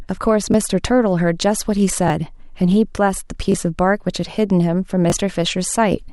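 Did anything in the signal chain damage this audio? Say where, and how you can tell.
Yes: a repeated buffer at 0.52–0.54, 2.08–2.10, 3.52–3.54 and 5.10–5.12 s, in the driver or buffer stage. Each time a 20 ms piece of speech plays twice with a hard join, giving a brief buzzy stutter. The device, starved of new audio, replayed its last block (which fits a 20 ms buffer), and about that much audio is lost.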